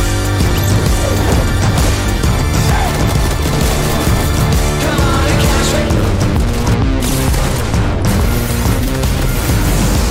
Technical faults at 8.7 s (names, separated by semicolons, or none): none